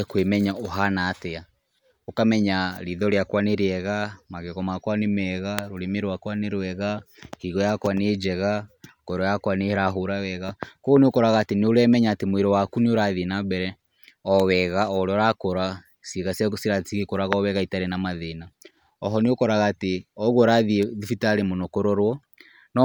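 A sharp snap cuts across the speech at 14.40 s, and a second, quieter one follows at 20.83 s. Both are electrical switching spikes, likely from a nearby switch or motor arcing briefly and the audio line picking up the discharge.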